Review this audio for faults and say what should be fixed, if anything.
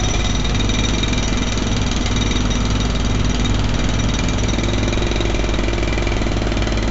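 A gritty hiss rides on every loud passage from start to finish, with harsh distortion on sharp attacks and nothing above about 7.7 kHz. This is heavy 4-bit ADPCM compression: each sample is coded as a small step from a prediction, and the step size cannot keep pace with sudden changes. The dull top end fits a 16 kHz sample rate at roughly 64 kbps. Re-export from the original source using PCM or a modern codec at a higher sample rate instead of ADPCM.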